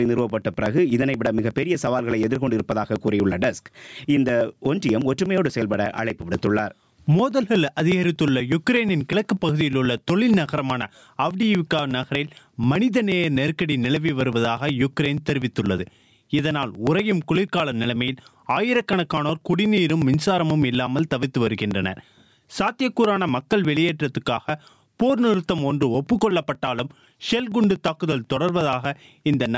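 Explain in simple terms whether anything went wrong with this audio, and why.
Two things went wrong. First, there's gain pumping throughout: loud and soft parts end up closer in level. That's likely the input gain set far too high, with a fast limiter constantly yanking the level back down, so everything sounds squashed.

Second, there are periodic USB or driver dropouts from 0.05 s to 29.46 s, a tiny slice of audio, around 4 ms, skipped every 0.12 s. Something in the background is briefly stalling the audio path on a fixed schedule, so you hear a steady ticking only while there's sound.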